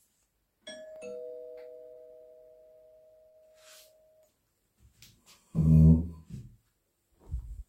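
Sounds with two short stalls from a late packet: the jitter buffer ran dry near 1.93 s and 3.29 s, stretching the sound by 24 ms and 48 ms, held with a slight buzz or dip.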